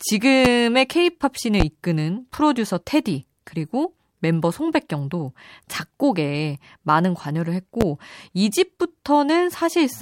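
Brief voltage steps, likely from a switch or static discharge, hit the signal, giving a loud pop at 0.45, 1.60 and 7.81 s, roughly 20, 15 and 15 dB above the speech.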